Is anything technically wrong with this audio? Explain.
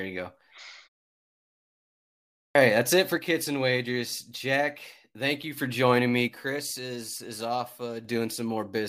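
Yes, there are three faults. At 2.27 s, after a pause of about 1.5 s, there is a clipped start after a pause: the output device, idle through the silence, takes about 0.28 s to wake, so the opening of "that's it for" is swallowed and the speech starts abruptly. The normal muting of pauses is different because it never eats the start of a word.

From 3.17 to 5.57 s and again from 6.28 to 8.05 s, one channel drops out. The level falls abruptly by about 6 dB, which is likely from losing one stereo side before the mono sum. Unlike a gradual fade, the drop is a sudden step, and the full level returns around "joining me".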